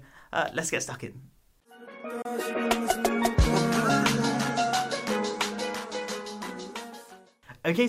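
At 2.22 s the audio cuts out for about 27 ms, most likely a Bluetooth dropout, with packets missing the headphones, then resumes at 2.26 s as though it never stopped.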